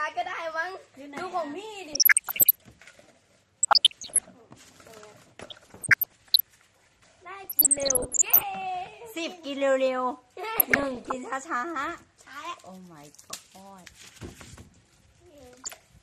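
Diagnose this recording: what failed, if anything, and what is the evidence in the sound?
Codec stage: a dull, gurgling, granular texture runs throughout. On a spectrogram the upper sub-bands blink on and off. This is likely MP2 compression at a rate consistent with 80 kbps.

Transmission stage: DAB burbling, short blips of noise in single sub-bands at 1.88–2.62, 3.61–4.26, 5.41–6.41, 7.44–8.43, 10.56–11.14 and 15.62–15.82 s. The spectrogram shows isolated sub-band blocks leaping per frame, where bit errors of around one percent slipped past correction.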